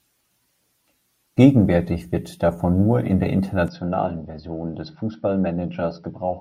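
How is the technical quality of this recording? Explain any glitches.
The recording has one clear fault. From 3.68 s to the end, the speech abruptly turns duller and slightly quieter, about 5 dB down, with nothing above 5.7 kHz and a faint new background noise far below the speech. There is no gap at the change. The likely cause is the input switched to a poorer device mid-recording, such as another microphone or a headset's call profile. That device's narrower band strips the upper frequencies, and its own level and noise floor come with it.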